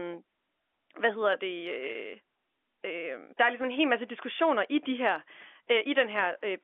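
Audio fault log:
1.92–1.95 s, packet loss with pitch repetition: a 30 ms gap, fitting one lost packet, filled by repeating the last pitch period. It sounds like a brief buzzy hold, with identical waveform cycles and flat spectrogram harmonics.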